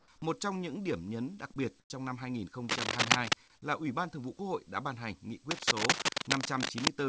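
Comfort noise in place of the background, 1.80 to 1.90 s, between "điểm nhấn đặc biệt" and "trong năm": for 100 ms the real room tone gives way to a flat, featureless hiss about 4 dB quieter. The likely cause is discontinuous transmission, where the receiver fills a gap the sender judged silent with synthetic noise.

Cable scratch noise, 2.69 to 3.36 s after "đặc biệt trong năm" and 5.51 to 6.88 s after "đã ban hành nghị": dense, uneven scratching and rustling rides over the speech, somewhat louder than it. This likely comes from a worn cable or connector being moved, its contact resistance jumping rapidly.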